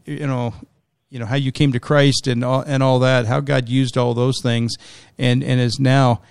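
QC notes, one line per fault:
No faults heard.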